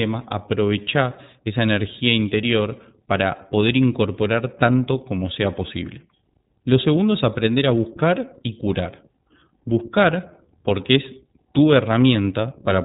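Speech runs through the iLBC codec for the whole clip: nothing passes above 3.8 kHz, and the speech has a plainly rough, synthetic edge. That graininess sets it apart from a clean narrowband line, and fits iLBC's 30 ms mode at about 13.3 kbps.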